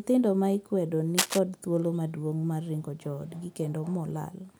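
From 1.18 to 1.39 s, a rough scratching rustle roughly as loud as the speech sits over it, cable scratch noise, likely from a worn cable or connector being moved.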